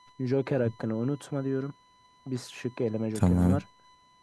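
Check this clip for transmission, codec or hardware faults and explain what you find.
One hardware fault is present: USB whine, running through the whole clip. The bus draws current in 1 ms frames, and that repeating load leaks into the audio through the power or ground, so it appears as a steady tone at 1 kHz. It sits roughly 30 dB below the speech. The result is a thin, fixed-pitch whistle that stays put whether the speaker is talking or pausing.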